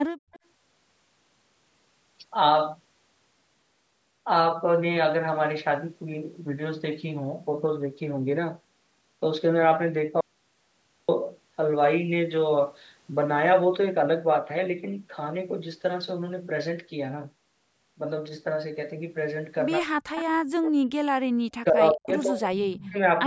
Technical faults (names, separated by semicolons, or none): background gated by the echo canceller; echo leak; audio dropout to silence; speech suppressed in double talk